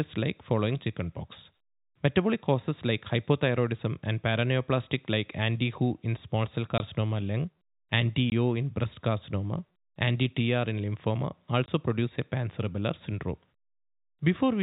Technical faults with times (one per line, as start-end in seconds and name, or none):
6.78 packet loss filled with silence
8.30 packet loss filled with silence
11.66 packet loss filled with silence